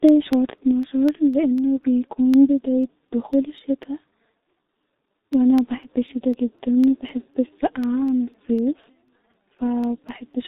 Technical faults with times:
0.00-10.47 G.723.1 codec
0.09-10.34 periodic USB or driver dropouts

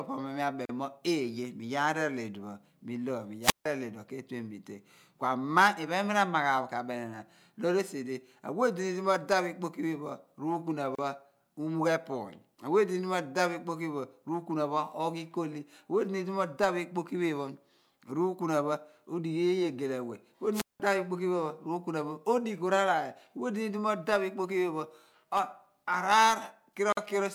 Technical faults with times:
0.65-0.69 gap at a join of encoded pieces
3.42-3.65 wireless microphone squelch dropout
10.95-10.98 gap at a join of encoded pieces
20.52-20.80 wireless microphone squelch dropout
26.92-26.97 gap at a join of encoded pieces

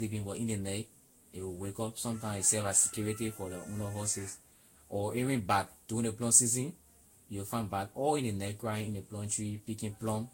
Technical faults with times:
0.00-10.33 generation loss

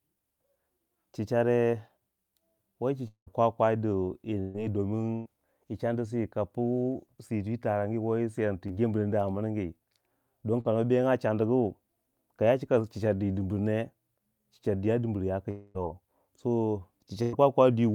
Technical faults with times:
3.07-3.28 long network dropout
4.40-4.56 burst of packet loss
5.14-5.27 burst of packet loss
8.67-8.71 short concealed packet loss
10.60-10.67 short concealed packet loss
15.51-15.76 long network dropout
17.22-17.34 burst of packet loss

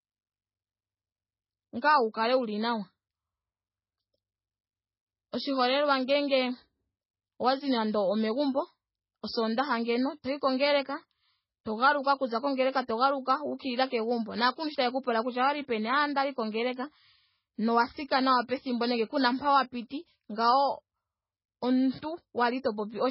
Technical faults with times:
0.00-23.11 MP3 compression
12.87 pre-echo

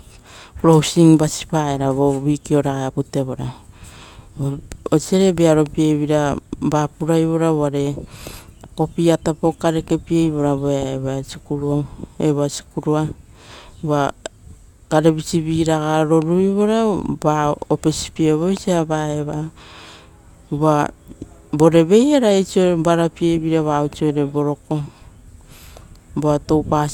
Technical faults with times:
none

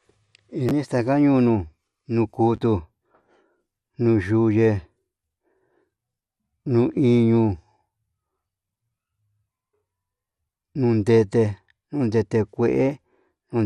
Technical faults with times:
0.00-13.65 MP2 compression

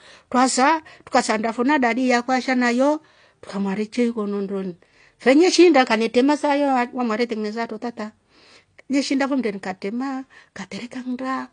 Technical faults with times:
0.00-11.53 AAC compression

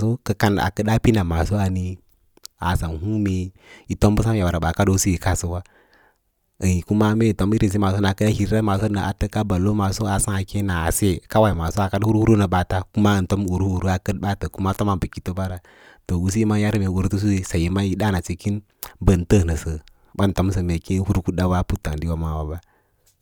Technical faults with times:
none

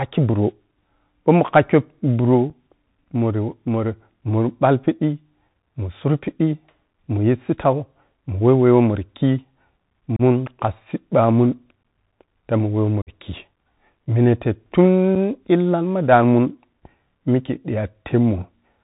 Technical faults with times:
0.00-18.84 Bluetooth CVSD headset codec
2.50 unconcealed Bluetooth headset packet loss
10.16-10.21 unconcealed Bluetooth headset packet loss
11.83 unconcealed Bluetooth headset packet loss
13.02-13.10 unconcealed Bluetooth headset packet loss
15.15 unconcealed Bluetooth headset packet loss

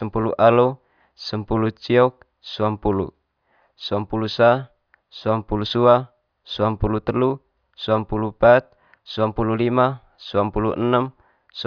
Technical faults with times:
none

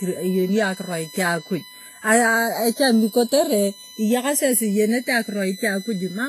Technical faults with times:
0.00-6.29 USB whine
0.00-6.29 channels drifting apart
0.00-6.29 transcoding between lossy codecs

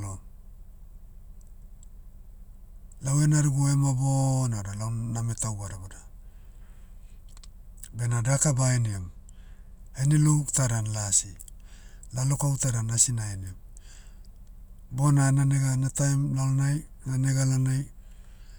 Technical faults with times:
7.97-9.80 channel delay (comb filtering)

